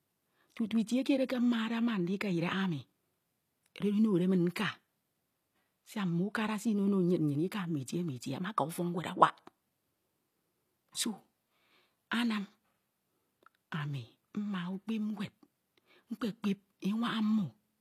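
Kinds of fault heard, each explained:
HE-AAC compression: Throughout the speech the s sounds and other high-frequency detail come out gritty, metallic and lispy, although the top end stays bright. This is likely spectral band replication rebuilding the treble from copied lower bands, which fits a low bitrate around 24 kbps.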